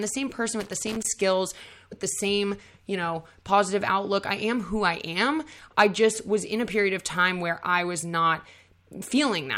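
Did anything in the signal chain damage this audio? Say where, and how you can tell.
Yes. Just after "the same person", 0.60 to 1.06 s, there's loose connector crackle in the analogue wiring: a worn contact chopping the signal into irregular scratchy crackle.

At 1.91 s, right before "the same you know", there are compressed frames skipped at the codec. About one 24 ms frame vanished, so the audio jumps ahead by roughly 20 ms.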